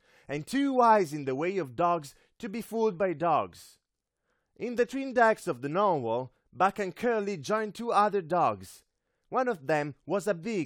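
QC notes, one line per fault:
No technical faults can be heard anywhere in the speech recording.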